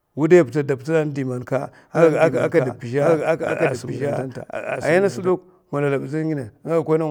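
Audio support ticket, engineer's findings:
Doubled audio track, 1.95–5.29 s. Likely a second capture path or out-of-step edit feeding the mix a late duplicate. Full-band copy of the speech trails by about one second, roughly 5 dB down, no decay or room colour. Copy cuts in and out abruptly at the segment edges.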